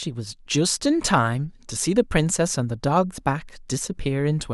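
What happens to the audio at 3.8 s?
Nothing goes wrong at 3.8 s; the speech carries on intact through that moment, with no dropout, click, distortion or other fault.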